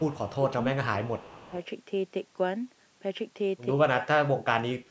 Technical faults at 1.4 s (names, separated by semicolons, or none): speech suppressed in double talk; echo leak